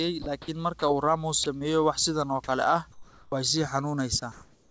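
From 0.22 to 0.48 s the sender's voice detector likely toggled transmission on and off more than once. This sound chopped by the voice detector swaps about 100 ms of speech for comfort noise, so the passage turns choppy and the background flickers between real and synthetic.

At 0.80 s the detector likely mistook a quiet moment for background and stopped sending. In this sound dropped by the voice detector, 20 ms of speech gives way to a brief patch of steady noise.

From 1.44 to 1.65 s, just before "wax sidan oo kale", the sound is again chopped by the voice detector, likely for the same reason. About 48 ms are filled with synthetic noise, and the speech stutters briefly.

Between 2.92 and 3.32 s, discontinuous transmission likely cut the stream during a pause. Comfort noise in place of the background fills those 0.4 s. The real room noise, sitting about 30 dB below the speech, is replaced by a flat, featureless hiss about 7 dB quieter.

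At 3.30 s, after "sidan oo kale ah", the detector likely noticed the returning speech too late. This onset clipped by the voice detector drops 20 ms, so "way sii" begins abruptly, without its soft start.

At 4.20 s another sound dropped by the voice detector, likely through the same misjudgement, loses about 10 ms to noise. From there, after "kale ah way sii", comfort noise in place of the background, likely from transmission stopping again, runs for about 0.4 s to the end. All of this comes through a G.722 call path that carries nothing above 8 kHz.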